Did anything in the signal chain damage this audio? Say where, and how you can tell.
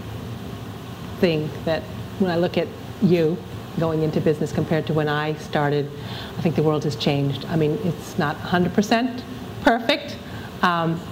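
Yes, sample clock jitter at the converter, present throughout the clip. A fine hiss and roughness rides on the sound and tracks it: it thickens on loud passages and bright, high-frequency content and drops away in the quiet gaps. The converter's clock wobbles by something on the order of a couple of microseconds, so each sample lands slightly early or late. Steep waveform slopes turn that timing error into an amplitude error roughly 40 dB below the signal.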